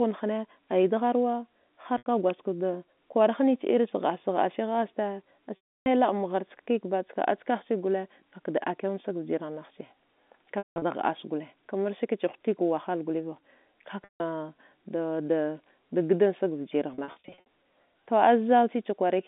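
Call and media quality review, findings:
Packet loss with pitch repetition, five events: 1.98 s (80 ms, after "nighe aya degharwa"), 5.56 s (300 ms), 10.58–10.82 s (scattered, 180 ms longest run, before "da hdassa"), 14.04 s (160 ms), 16.94–17.45 s (scattered 60 ms bursts). The receiver loops the last pitch period, producing a buzzy hold that fades to silence on longer gaps. On the spectrogram this shows as frozen horizontal harmonics that taper into a blank gap, then a cross-fade back. The G.711 band-limit near 3.6 kHz is visible throughout.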